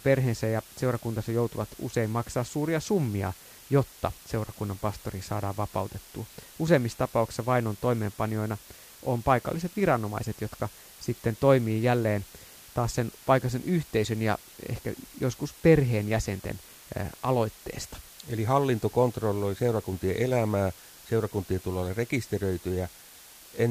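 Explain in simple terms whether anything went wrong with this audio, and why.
Yes, something went wrong: a steady hiss runs through the whole speech recording. This is low bit depth with dither. The sound was stored with very few steps, 7 bits, and mixed with noise before rounding. Unlike plain low bit depth, there's no gritty distortion, just even hiss.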